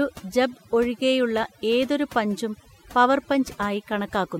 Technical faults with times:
0.00-4.39 overdone noise removal

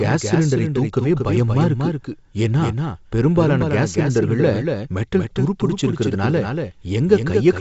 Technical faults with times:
0.00-7.60 doubled audio track

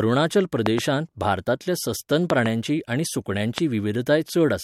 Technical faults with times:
0.66-0.80 loud pop
2.30-2.48 loud pop
3.58-3.60 loud pop

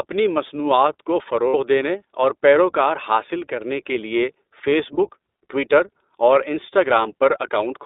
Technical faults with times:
0.00-7.86 iLBC codec
1.48-1.54 lost iLBC frames
4.96-5.00 lost iLBC frames

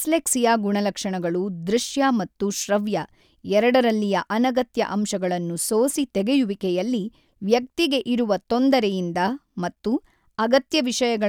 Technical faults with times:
none

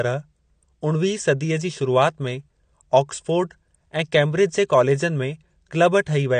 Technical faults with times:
0.00-6.40 AAC compression

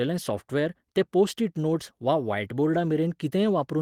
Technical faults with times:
none

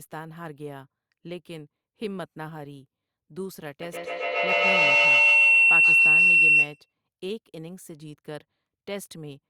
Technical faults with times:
3.82-6.93 feedback howl

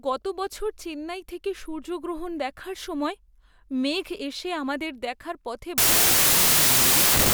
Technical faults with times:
5.78-7.33 wrong sample width

